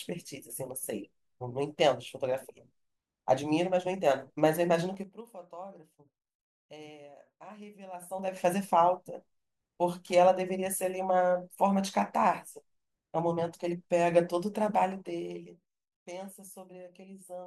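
Zipper noise appears three times in this speech clip as level moves are applied in coarse, unsmoothed steps at about ten per second, each step clicking. From 4.86 to 5.21 s, about 6 dB steps pull the level down by roughly 20 dB. From 7.94 to 8.45 s, about 4 dB steps bring it back up by roughly 20 dB. From 14.85 to 16.04 s, finer steps of about 1 dB take it down by roughly 15 dB, producing a lighter ticking.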